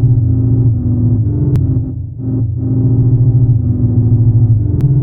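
A brief glitch cuts through the sound at 1.56 s and again at 4.81 s. Both are damaged data in a compressed stream: corrupted bytes made the decoder misread those frames and lose sync until it found the next frame header.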